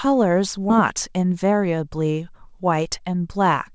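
Right around 0.70 s there's a skip ahead: a chunk of roughly a third of a second just isn't there, and playback jumps straight to later speech with no gap and nothing filling the hole. That points to the receiver dumping buffered audio that was already queued, maybe after an overflow, so whatever was in that stretch is lost and the two edges butt together almost seamlessly, which makes the speech lurch forward.

Right after that, from 0.82 to 1.52 s, you get a jitter buffer speed-up. The buffer was still holding more than it wanted, so the receiver kept snipping out tiny pitch-period-sized slivers, roughly 50 ms in total, to catch up. The speech runs at about 107% speed while the pitch stays put, so it comes across as slightly rushed and clipped rather than higher, all over the G.722 path with its usual cutoff at 8 kHz.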